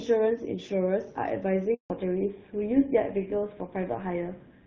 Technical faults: handover gap; fallback to narrowband

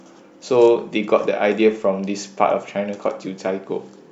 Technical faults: none

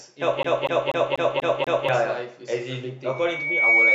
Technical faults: CD stuck on one turn; loudspeaker feedback squeal

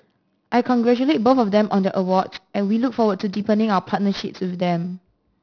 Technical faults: aliasing

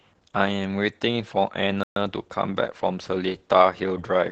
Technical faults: Opus voice compression; playback stall

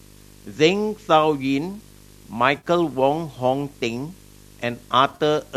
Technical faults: video or display buzz; AAC frame loss with concealment

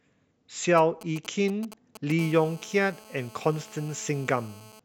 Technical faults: GSM signalling bursts; GSM phone buzz

